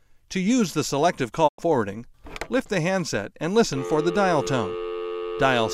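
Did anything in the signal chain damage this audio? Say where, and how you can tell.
Yes. A digital broadcast dropout in the transmission and reception stage cuts the sound from 1.47 to 1.60 s. The level ramps down over about 20 ms into silence, and the audio resumes mid-programme with the intervening material missing. On the waveform this shows as a short taper into a flat line; on a spectrogram it is a blank vertical band across every frequency. The receiver muted when frames failed, and roughly 96 ms lost fits a few corrupted frames.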